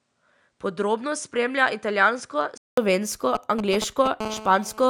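From 0.0 to 2.78 s the speech sounds duller and about 5 dB quieter. This is likely an input switched to a poorer device. The spectrogram shows nothing above 10.5 kHz, a faint new noise floor, and a 200 ms gap at the switch.

From 3.35 to 4.22 s, GSM signalling bursts add a galloping dit-dit-dit of short 217 Hz buzzes, only somewhat below the speech level. They show as clustered vertical striations.

From 4.22 to 4.85 s this becomes a steady GSM phone buzz, a raspy 217 Hz tone about 14 dB below the signal. On the spectrogram it appears as continuous evenly spaced harmonic lines.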